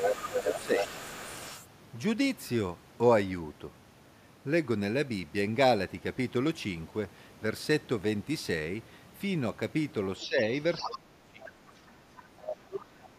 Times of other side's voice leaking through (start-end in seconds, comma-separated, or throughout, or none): 0.00-1.68, 10.20-10.26, 10.80-11.49, 12.17-12.55